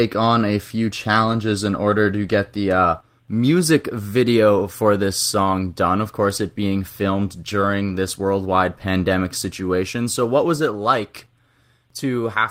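Speech with two lost packets rebuilt from error correction, at 1.31 to 1.33 s between "on a few" and "in order to get", and at 7.61 s between "course it being filmed" and "this worldwide pandemic situation". Each rebuilt stretch lasts 20 ms, fitting one lost packet. There is no gap. The decoder played a low-bitrate copy carried by the next packet, so those moments sound briefly rougher and noisier.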